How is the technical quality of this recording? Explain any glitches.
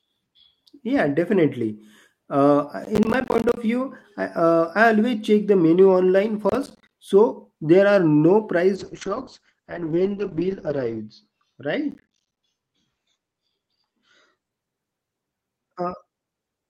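The recording has two problems: three bursts of processor overload crackle and one stretch where the call bitrate drops.

Crackle hits at 2.84 to 3.57 s (just before "view I uh I"), 6.49 to 6.91 s (between "the menu online" and "so there are no"), and 11.91 to 12.37 s. Each time the CPU misses a run of short, roughly 10 ms buffer deadlines and drops in silent gaps, which comes across as gritty tearing.

The call bitrate drop runs from 8.76 to 14.57 s, right after "so there are no". The encoder falls from 40 to 8 kbps and bandwidth narrows from 20 kHz to 8 kHz, bottoming out for about 2.25 s, so the sound goes rough and muffled.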